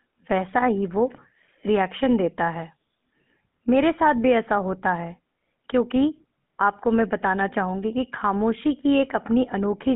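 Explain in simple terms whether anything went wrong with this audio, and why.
The speech passed through the GSM full-rate codec, the original mobile-phone coder, which rebuilds the voice from a rough model driven by coarse pulses. Throughout, this adds a buzzy, gravelly roughness, and only sound between 150 Hz and 3.5 kHz survives, so it's thin and muffled.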